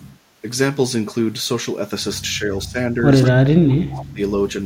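From 2.38 to 2.97 s the speech dips by about 15 dB. From 3.21 to 4.2 s it drops by about 30 dB. This is speech suppressed in double talk, likely an echo canceller turning down its own talker along with the loudspeaker echo. Inside the second dip, echo leak appears at 3.22 to 3.28 s and 3.93 to 4.05 s. A brief copy of the speech returns 170 ms late, about 10 dB and then about 20 dB below it. The loudspeaker side's canceller likely failed to remove it.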